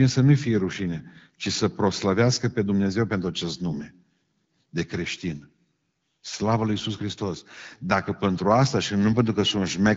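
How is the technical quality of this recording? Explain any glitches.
No glitches or faults can be heard in this recording.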